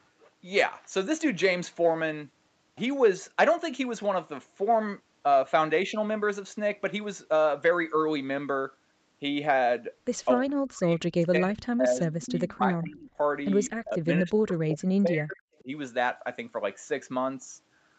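Around 10.41 to 10.49 s the speech briefly drops by about 30 dB, then from 10.68 to 13.18 s and again from 13.78 to 15.69 s it keeps ducking and breaking up in chunks, dipping around 40 dB at worst. That chopped, pumping sound is likely speech suppressed in double talk: with both ends talking at once, the echo canceller mistook the near talker for loudspeaker echo and squashed them along with it.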